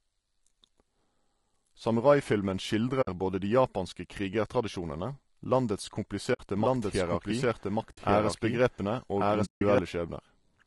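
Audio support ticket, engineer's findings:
Speech grainy and rough throughout, noise filling gaps between harmonics, top band thin or synthetic-sounding. Likely cause: low-delay AAC compression (AAC-ELD), sound fits a bitrate near 32 kbps. Spectrogram: smeared harmonics, hazy inter-harmonic fill, patchy upper band.

AAC frame loss with muting at 3.01–3.08 s (just before "både de japanske krigertradisjonene"), 6.33–6.40 s (right after "de japanske krigertradisjonene landets"), 7.91–7.98 s, each 60 ms, and 9.45–9.62 s, 160 ms. Lost frames zeroed by decoder, overlap windows fade edges. Waveform: soft-tapered silent gaps.

Doubled audio track 6.56–9.78 s: full-band copy at roughly equal level, trailing by about one second, no decay or room colour, starting and stopping abruptly. Likely a second, slower capture path mixed in. Spectrogram: speech pattern repeated, offset horizontally about one second.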